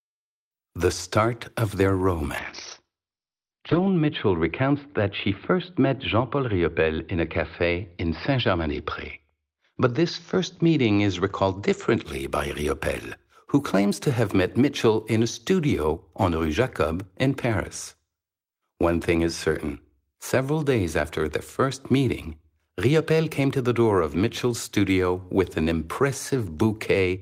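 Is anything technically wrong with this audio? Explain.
Yes. A call bitrate drop starts at 2.39 s, just after "start of their", and lasts until 12.10 s. The connection's estimated bandwidth fell, so the encoder was forced to spend far fewer bits. Coding grew coarser, and the top of the spectrum was cut from about 20 kHz to 6 kHz. The speech sounds muffled, rough and watery. The worst stretch lasts about 1.5 s and fits a fall from roughly 32 kbps to 11 kbps.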